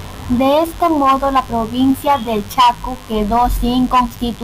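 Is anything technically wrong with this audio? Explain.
Yes. A steady, raspy mains buzz sits under the speech for the whole clip, roughly 25 dB below it. It comes from the 50 Hz mains supply. Something like a dimmer, a rectifier or an unshielded cable has let sharp switching spikes into the signal twice per mains cycle, and those spikes carry a dense ladder of 50 Hz harmonics stretching up to several kHz, which gives the hum its gritty edge.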